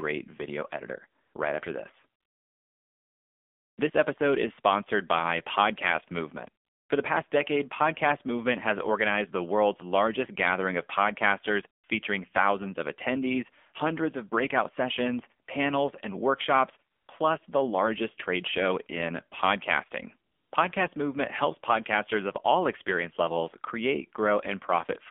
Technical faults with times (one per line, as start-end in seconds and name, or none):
0.00-25.11 AMR narrowband mobile codec
1.22-1.34 AMR comfort noise
2.20-3.78 AMR comfort noise
6.64-6.90 AMR comfort noise
11.82-11.84 AMR comfort noise
16.92-17.08 AMR comfort noise
20.32-20.52 AMR comfort noise